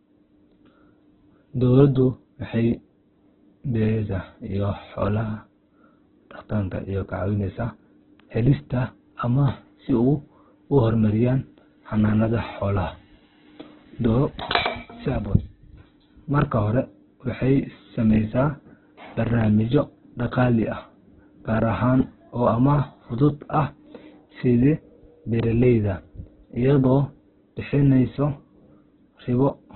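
It's a speech clip, and the whole thing is band-limited, with nothing at all above about 4.3 kHz, so it sounds narrowband and boxy from start to finish. On top of that the voice comes through rough and grainy, with noisy fill where the detail should be, rather than the swirly holes you'd get from MP3. That heavy damage is most likely Opus compression in its CELT music mode, starved down to something like 8 kbps.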